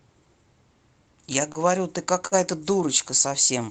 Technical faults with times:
1.52-1.58 short stall from a late packet
2.27-2.34 short stall from a late packet

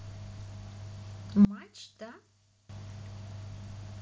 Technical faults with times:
1.45-2.69 one channel inverted

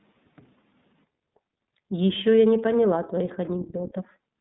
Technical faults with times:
0.00-4.40 iLBC codec

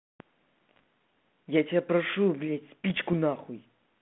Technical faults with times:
0.76-0.79 bit errors on an ADPCM link
2.90-3.13 bit errors on an ADPCM link

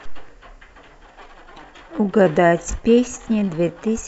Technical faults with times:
1.07-4.07 time-stretched section

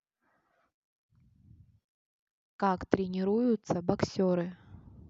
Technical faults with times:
none

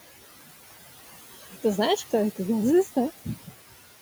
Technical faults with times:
0.00-4.01 noise suppressor artifacts

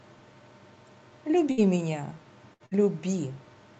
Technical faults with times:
1.51-1.60 burst of packet loss
2.53-2.74 burst of packet loss

